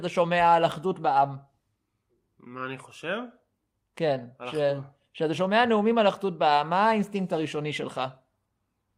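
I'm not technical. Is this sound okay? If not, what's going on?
Yes, nothing in this speech recording points to a technical fault, so there is nothing here that needs fixing.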